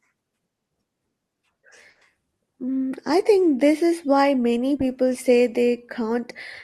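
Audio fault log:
1.89–2.03 s, burst of packet loss. About 120 ms never arrived. The receiver stretched the last sound and faded it, then speech resumes with that stretch gone.
4.77–4.81 s, short concealed packet loss. About 20 ms went missing. The receiver filled it from the preceding sound and blended back, leaving a brief smear.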